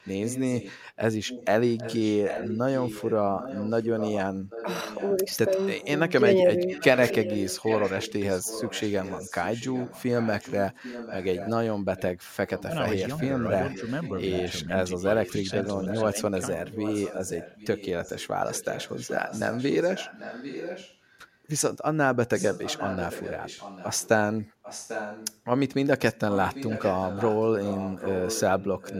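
A loudspeaker on the far end is likely being picked up by its microphone, and its echo canceller did not remove all of it, so an echo leak returns a copy of the speech about 794 ms late. It runs from 0.0 to 0.72 s, at about 15 dB below the direct speech, then at about 10 dB below from 1.25 to 5.89 s, 6.66 to 21.19 s, 22.34 to 24.08 s, 24.62 to 25.39 s and 26.06 s to the end. The result is a trailing, delayed repeat of the voice.

Inside the longest echo stretch, the canceller apparently cannot tell the local talker from the returning echo, and speech suppressed in double talk follows. At 14.65 to 14.75 s the level sags only slightly, about 5 dB. From 16.12 to 16.39 s it drops by about 30 dB, punching a near-silent gap of roughly a third of a second into the speech.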